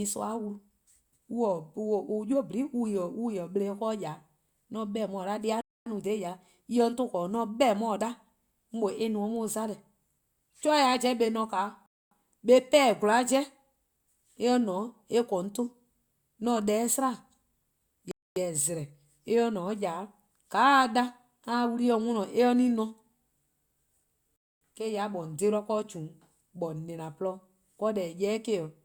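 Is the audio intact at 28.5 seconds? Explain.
Yes, at 28.5 seconds the speech plays through intact, with no audible dropout, distortion or other fault at that moment.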